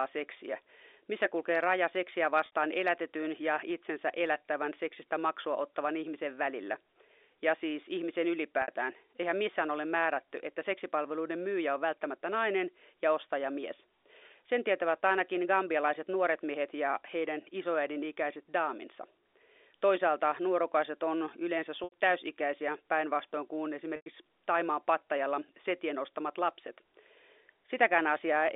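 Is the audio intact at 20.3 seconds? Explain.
Yes, at 20.3 seconds the speech comes through intact, with nothing breaking up the telephone-band G.711 sound at that moment.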